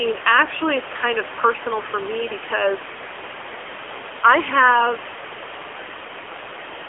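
Throughout the speech, AMR narrowband mobile codec damage: nothing above 3.5 kHz, and a buzzy, synthetic texture consistent with a low bitrate near 8 kbit/s, unlike clean band-limiting. The room noise, about 10 dB below speech, warbles.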